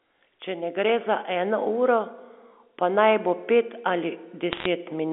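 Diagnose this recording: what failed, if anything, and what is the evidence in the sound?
The failure sits in transmission on the digital phone line. The G.711 A-law path carries the speech in its narrow 250 Hz to 3.5 kHz band. From 4.53 s to 4.66 s, a brief burst of crackle rides over the otherwise unchanged speech. These are bit errors on a digital phone line. Each flipped bit corrupts a single sample. Hits on the sign bit or upper bits throw that sample far off and produce sharp ticks. The density suggests an error rate around half a percent.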